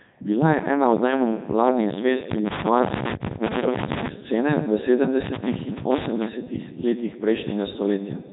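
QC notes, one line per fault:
Throughout, Codec 2 vocoder: the speech is heavily damaged and comes across robotic and buzzy. That happens because the codec never keeps the actual waveform; it sends only pitch, voicing, energy and a rough spectral envelope, and the decoder rebuilds the voice from sine waves. The damage is heavy even at the 3.2 kbit/s mode. There's also nothing above 3.8 kHz, so everything sounds narrowband and boxy on top of the buzz.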